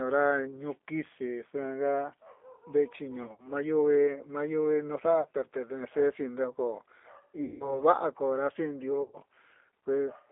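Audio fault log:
Throughout, G.729 codec: the call was squeezed into a line band of 300 Hz to 3.6 kHz and rebuilt from a vocal tract filter, pitch predictor and a few pulses per frame, which fits an 8 kbit/s G.729A stream, leaving the speech plainly rough, thin and synthetic.
3.23–3.47 s, 5.21–5.27 s, 7.44–7.83 s and 9.02–9.18 s, VoIP packet loss concealed by the speech codec: about 100, 40, 160 and 120 ms of audio went missing, with the first loss scattered over 160 ms. The decoder extended its last pitch and filter at falling gain, so the speech smears into a fading buzzy tone or coloured noise and stays weak briefly after packets resume.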